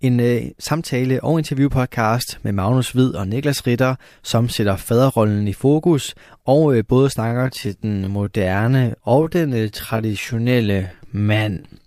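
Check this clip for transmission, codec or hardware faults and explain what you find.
One fault stands out: a time-stretched section. From 7.21 s, right after "fokus og øh både", to the end, software likely stretched the audio to 0.66 times its speed, repeating short slices to hold pitch. The pace abruptly drags while pitch stays unchanged.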